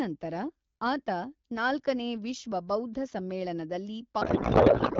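From 4.21 s to the end at 5.00 s, a codec payload misread replaces the AMR wideband speech, clear before this point, with garbled warble and noise that barely tracks it, which fits octet-aligned frames being decoded as bandwidth-efficient. Unlike loss concealment, there are no gaps or repeats, only persistent nonsense.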